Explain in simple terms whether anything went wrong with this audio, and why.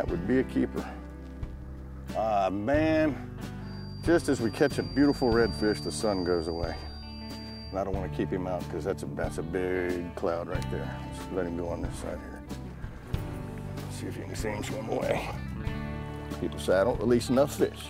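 From 3.58 to 7.82 seconds, a thin whistle at about 4.7 kHz, slowly swelling and fading, sits behind the sound, well below the main audio. This is a feedback whistle. Likely cause: a loudspeaker feeding back into the microphone, ringing at one pitch without becoming a howl.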